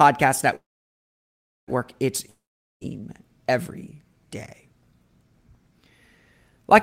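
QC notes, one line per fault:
0.55–1.70 s, call audio freeze: the speech trails into a short fading buzz, then about 1.07 s of silence, and picks up exactly where it stopped with nothing lost, now running about 1.1 s late. Packets were likely held up in transit, draining the jitter buffer.
2.30–2.83 s, long network dropout: a brief fading buzz carries the last sound forward before about 0.45 s of silence. When speech returns, roughly 0.52 s of it is simply gone. A run of packets likely never arrived, leaving the receiver nothing to play.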